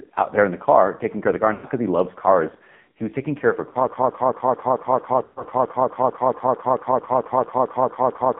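The whole clip is speech passed through the AMR narrowband mobile codec. The band runs only from about 150 Hz to 3.7 kHz, with nothing above that. Damage is heavy. The voice is buzzy and synthetic, which fits a low AMR-NB mode around 5.9 kbps. At that rate the vocal-tract model gets very few pulses to work with.

Lost AMR speech frames come first at 1.54 to 1.67 s. That is about 100 ms, between "care of the car" and "because he loves cars". The decoder repeats its last good settings at falling gain. The sound smears and fades, then returns rough. A shorter loss follows at 3.70 to 3.77 s, about 40 ms, just after "taking care of her". It is a brief warbling dip.

At 3.88 s a broken-record loop begins. A 222 ms fragment repeats exactly, back to back, about 20 times, until the clip ends. Nothing new is heard after that point. The likely cause is a stalled player or stream that kept resending the last fragment it held.

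Within that loop, at 5.24 to 5.47 s, lost AMR speech frames recur for about 120 ms, again after "taking care of her". The repeating sound stretches and fades toward silence, then comes back weak.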